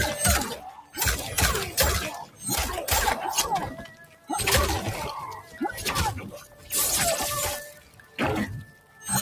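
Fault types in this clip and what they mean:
Noise suppressor applied to music or sounds: a speech-tuned suppressor was left running, so sustained material keeps getting mistaken for noise, with level swinging by roughly 15 dB.
Sound cut by the noise suppressor: steady stretches get pulled down hard, about 9 to 13 dB, in seven dips like 3.72–4.29 s and 7.66–8.18 s.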